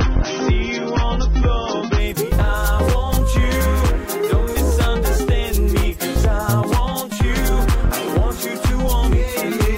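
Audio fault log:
0.0–2.0 s, adaptive stream starting at a low bitrate: the top end is missing, with nothing above 6.3 kHz, and compression smearing is plain until the sound suddenly brightens without any gap. The player opened on a low-bitrate version, consistent with roughly 24 kbit/s AAC, then stepped up, which fits a move to about 96 kbit/s.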